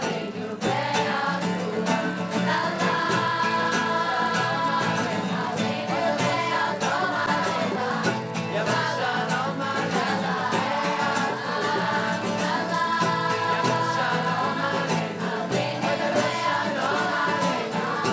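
A steady buzz at about 100 Hz rides under the sound for the whole clip, present only while there is signal. This is a resampler restarted on every block: each 10 ms block was converted on its own, likely from 48 kHz down to 16 kHz, leaving a small error at every block edge.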